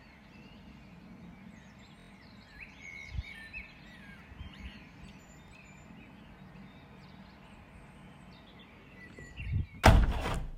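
A recording of sounds with Bluetooth stutter in three places. From 2.00 to 2.10 s the audio repeats a short slice as a brief machine-gun buzz, and about 93 ms of material is skipped, which fits four lost packets of roughly 23 ms each. Shorter single hiccups follow at 5.48 to 5.52 s and 9.27 to 9.31 s, each losing about 23 ms. The receiver replayed its last buffer while data was missing, then resumed further on.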